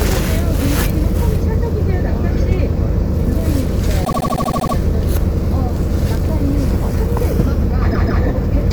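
Sounds, with repeated frames in two places. From 4.04 to 4.74 s, a 78.4 ms slice loops nine extra times, giving a rapid stutter and stretching things by about 0.71 s. Then from 7.90 to 8.22 s, a longer 156.7 ms chunk plays twice more, adding 0.31 s. The same stretch of compressed frames got written or sent again, so the decoder just replays it.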